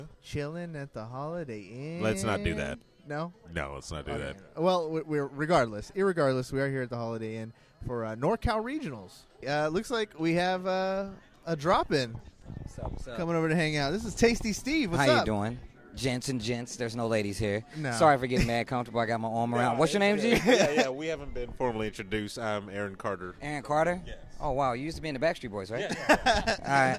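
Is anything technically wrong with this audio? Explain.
No, there's nothing technically wrong to point to here; it all holds together without a hitch.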